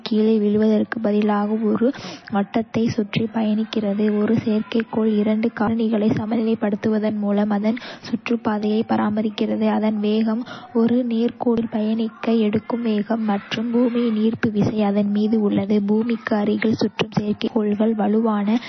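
It's a speech clip, and the whole thing carries plainly audible codec damage that's most likely from MP3 compression. Nothing comes through above 6 kHz, so the top end is simply gone, and the encoder has clearly been starved of bits, which fits a low bitrate somewhere around 26 kbps. When bits run that short, weak frequency lines get dropped and come back from frame to frame, giving the speech a watery, swirly texture and smearing the attacks. On top of that there are two skips, one at 11.58 s and one at 17.48 s, each losing roughly a tenth of a second with the two sides butted straight together and no gap of silence. They sit 6 s apart, which points to audio missing between chunks. The recorder or processor seems to work in 6-second blocks and drops a little sound each time it closes one and opens the next.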